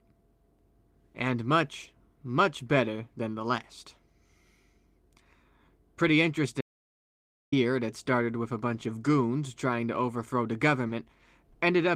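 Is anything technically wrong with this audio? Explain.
Yes. There are three faults in this speech clip.

An audio dropout to silence runs from 6.61 to 7.52 s, so about 0.91 s of speech is lost. The input likely disconnected or was muted while recording continued. The speech cuts off into a completely empty gap with no room tone. On a waveform it is a flat line, and on a spectrogram a blank vertical band with abrupt edges.

Short concealed packet loss comes at 10.87 to 10.91 s. About 20 ms never reached the decoder in time, and the receiver filled the hole by extending the preceding sound before blending back. It is heard as a brief smear or wobble, and on a spectrogram as a narrow patch of stretched, smoothed harmonics or noise.

A lost packet rebuilt from error correction overlaps that spot, at 10.89 s. One 20 ms packet was played from the low-bitrate copy carried in the next packet. 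That frame sounds rougher and noisier, and shows as a thin, grainier slice on the spectrogram.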